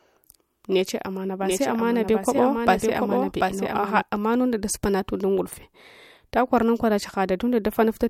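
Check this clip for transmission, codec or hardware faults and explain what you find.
One fault stands out, a doubled audio track from 1.42 s to 4.02 s, between "neche amana" and "amanunda dasupana und ungudufe". The speech is shadowed by a second full-band copy trailing about 0.7 s behind and roughly 5 dB quieter. It carries no reverb tail or room colouring, and it switches on and off abruptly at the edges of that span. The likely cause is the signal being captured again through a slower path, or an edit leaving two misaligned copies in the mix.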